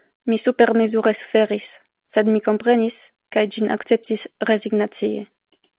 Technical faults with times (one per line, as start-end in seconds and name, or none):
none